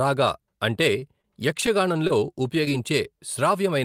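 At 0.99 to 1.04 s, a short stall from a late packet empties the jitter buffer. About 23 ms of held sound stretches the speech with no loss, adding 23 ms of delay. Short concealed packet loss follows at 1.22–1.25, 2.07–2.11 and 2.65–2.70 s. Each drops 20 ms, bridged by extrapolated sound as a brief smear or wobble.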